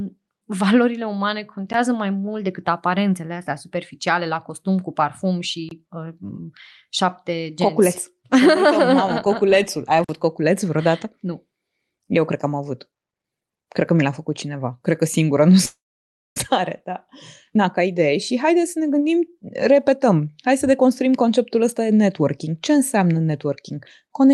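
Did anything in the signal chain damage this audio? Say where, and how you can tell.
Yes. Three blocks of digital silence point to the driver or buffer stage. There is a tick at 1.73 s lasting about 12 ms, a short hole from 5.69 to 5.71 s lasting 23 ms, and a longer gap from 10.04 to 10.09 s lasting 46 ms. The lengths fit output buffers of 512, 1024 and 2048 samples left unfilled and written as zeros. The cut in and out is instant, with no fade and no filler sound, which sets these apart from a network loss.

A long network dropout runs from 15.65 to 16.40 s, most likely from packets that never arrived. The receiver first extends the last sound as a fading buzz, then leaves about 0.58 s of silence. When audio resumes, roughly 0.4 s of material is gone and the delay has shifted by about 0.3 s. The decaying concealment before the silence is what tells it apart from a buffer underrun.

Jitter buffer speed-up follows the dropout, from 17.50 to 20.21 s. 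The receiver trims short pitch-period slices, about 0.3 s in total, to shed the delay built up during the outage. The sound runs at about 110 % speed and feels hurried, yet its pitch stays put. That separates this from a sample-rate mismatch, which would raise the pitch along with the speed.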